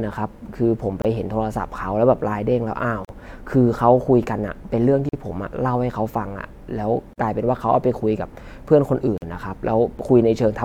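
A speech recording broken by a gap at a join of encoded pieces, heard at 1.02, 3.05, 5.09, 7.13 and 9.18 s. The first silence lasts about 30 ms and the rest about 43 ms, recurring every 2.0 s. Each piece was encoded on its own and butted together untrimmed, so encoder start delay and end padding leave short silences with smeared edges. Unlike packet-loss dropouts, the spacing is strictly regular and the speech resumes exactly where it stopped, with nothing missing.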